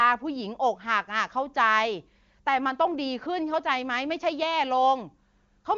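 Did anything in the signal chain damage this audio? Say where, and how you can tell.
No, nothing in the signal chain damaged this audio.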